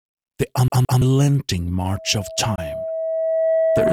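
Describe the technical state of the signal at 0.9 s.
At 0.9 s the signal is caught in a CD stuck on one turn, running from about 0.68 to 1.02 s. A scratch knocks the laser back a track, so a 168 ms slice of sound plays twice, with a brief mute at each jump. Unlike packet-loss concealment, which smears or fades a repeated fragment, the repeats here are exact copies at a rigid, even interval, giving the clean mechanical stutter of a skipping disc.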